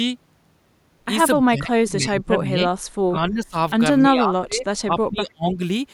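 Speech that sinks by roughly 20 to 25 dB at 1.45–2.68 s, 3.07–3.55 s and 4.03–5.62 s. This is speech suppressed in double talk, likely an echo canceller ducking the talker while the far side spoke. The waveform sags there.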